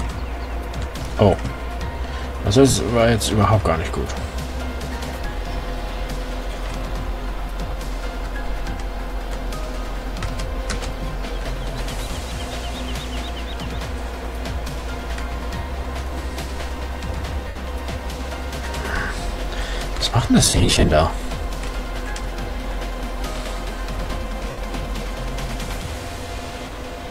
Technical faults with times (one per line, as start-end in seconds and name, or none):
2.70-2.75 lost LE Audio frames
17.47-17.56 lost LE Audio frames
20.41-20.91 lost LE Audio frames
24.50-24.58 lost LE Audio frames